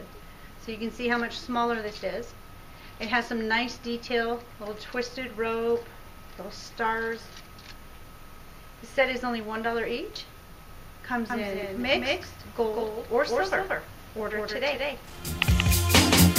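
From 11.3 s to the end, a doubled audio track appears: a second full-band copy follows the original about a fifth of a second behind, a few decibels quieter. It is most likely the same signal captured again through a slower path. Unlike an echo or reverb, the repeat is single, keeps its full brightness, carries no room colour, and does not decay. It also switches on abruptly rather than building up.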